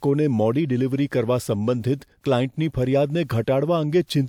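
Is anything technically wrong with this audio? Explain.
No, nothing technically wrong can be heard here.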